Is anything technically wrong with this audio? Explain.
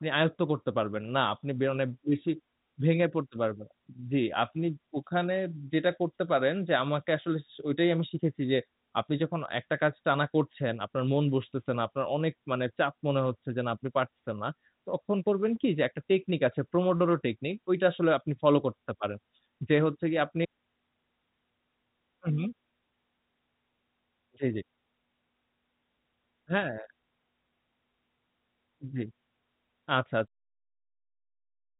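No, nothing here is technically wrong; it has the narrow, band-limited sound of a telephone line with nothing above roughly 3.8 kHz, and it eases out gently at about 30 s.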